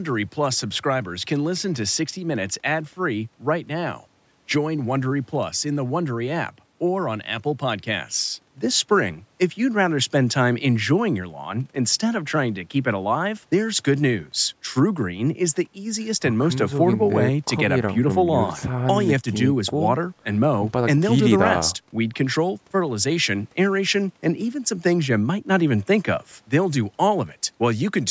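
Nothing stands out as a technical problem in the speech; the call's microphone processing trims the lowest bass as expected and leaves nothing above 8 kHz.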